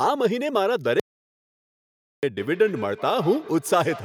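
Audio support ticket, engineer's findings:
Audio dropout to silence, 1.00 to 2.23 s: about 1.2 s of silence, no room tone. Likely input lost (device disconnect, failed link or mute) while encoding continued.

Feedback echo between two devices, 2.38 s to end: speech returns roughly every 150 ms, thinner each pass, peaking about 16 dB under speech. A second device on the call replays audio into this microphone, outside the local echo canceller's reach.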